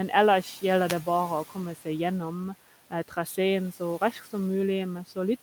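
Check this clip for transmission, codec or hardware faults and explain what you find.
Two kinds of fault are present: a brief radio dropout from a wireless microphone and two spots where the noise suppressor clips the speech.

From 0.87 to 0.95 s, a short swish of static bursts over the voice. This is a wireless microphone noise hit. The analogue FM signal briefly faded as reflected paths cancelled at the receiver, so receiver noise rose and masked the voice for that fraction of a second.

At 1.75 to 1.87 s and again at 4.12 to 4.28 s, the speech turns faint and swallowed, dipping about 12 dB in the first spot and about 6 dB in the second. Each dip lasts around a tenth of a second. This is speech cut by the noise suppressor, which mistook quiet speech for noise and turned it down with the background. The room noise sits about 20 dB below the speech.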